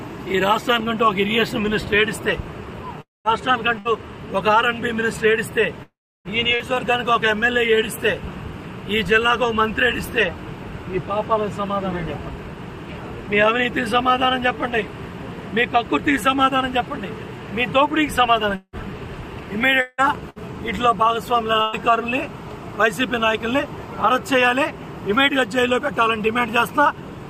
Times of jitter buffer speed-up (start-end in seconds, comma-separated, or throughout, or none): none